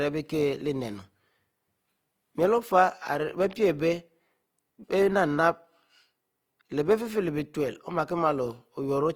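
Opus compression runs throughout this speech clip: audibly grainy, rough texture up to 20.3 kHz, likely from CELT-mode noise-filled bands starved of bits, fitting roughly 24 kbps.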